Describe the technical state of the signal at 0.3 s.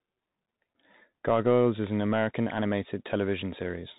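At 0.3 s, as throughout the clip, the speech carries the Bluetooth CVSD headset codec. Each sample is one up-or-down bit with an adapting step, which fits a 64 kbit/s stream. Nothing above 3.8 kHz passes, s sounds turn scratchy, and a granular hiss sits underneath, which sets it apart from a clean low-pass filter.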